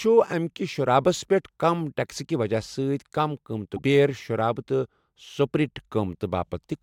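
Broken MP3 bit reservoir, from 3.76 to 3.79 s: the speech jumps forward and a brief glitch replaces about 28 ms of sound, roughly one frame's worth at 24 ms. Frames were likely dropped, so the next frame decoded borrowed bytes from the wrong frame.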